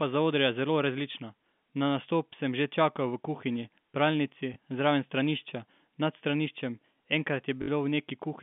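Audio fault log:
4.54–4.56 s, packet loss with last packet repeated: a 20 ms gap is filled by replaying the preceding stretch of audio, which fits a single lost 20 ms packet. A single repeat like this is heard as a small blip.
7.62–7.68 s, packet loss with last packet repeated: a 60 ms hole, consistent with three consecutive 20 ms packets, is bridged by looping the same segment. This gives a short robotic stutter with a buzz near 50 Hz. The speech around it is carried in the narrow 150 Hz to 3.5 kHz band of the G.711 telephone coding.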